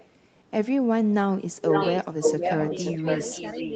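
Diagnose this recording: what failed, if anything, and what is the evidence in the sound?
Echo leak, call processing stage, from 0 to 0.08 s and again from 1.57 s to the end. A delayed copy of the speech trails it, first faint at about 385 ms and about 30 dB down, then at 519 ms and only about 5 dB below. This is likely a loudspeaker-side echo canceller passing its microphone pickup back.

Speech suppressed in double talk, call processing stage, between 3.01 and 3.29 s. While the echoed copy overlaps, the main speech dips in short pieces, about 100 ms in total, falling by as much as about 10 dB. The likely cause is the echo canceller's suppressor, unable to separate talker from echo, attenuating both.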